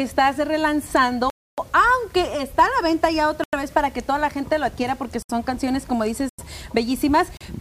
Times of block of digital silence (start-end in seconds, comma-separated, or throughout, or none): 1.30-1.58, 3.44-3.53, 5.23-5.29, 6.29-6.38, 7.37-7.41